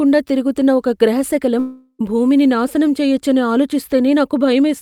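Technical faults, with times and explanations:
1.59 to 2.01 s, long network dropout: the speech turns into a smeared, buzzy continuation of the last sound that fades away over about 0.4 s. Then there's 50 ms of silence before the audio picks up again, with about 0.4 s of material simply gone. That's the likely signature of packets not arriving. The receiver stretches what it last had to paper over the hole, runs out of anything sensible, and rejoins later without the lost stretch.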